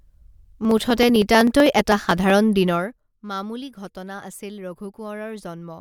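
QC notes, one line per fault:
0.08–2.3 s, periodic USB or driver dropouts: a steady tick recurs every 63.5 ms, about 40 in all, heard only while the speech carries signal. At each tick roughly half a millisecond of audio is skipped outright, so the waveform jumps from one point to a later one with a sharp discontinuity. On a spectrogram this shows as evenly spaced thin vertical broadband lines that fade out in pauses, and the waveform shows tiny steps at each splice.
2.65–2.99 s, zipper noise: the level falls by about 15 dB in discrete 1 dB steps, around 50 per second, with no smoothing between them. Each jump in gain puts a small click on the speech, so the fade rattles like a zip being pulled. The waveform envelope looks like a staircase rather than a ramp, and the spectrogram shows a dense comb of faint vertical lines about 20 ms apart over that third of a second.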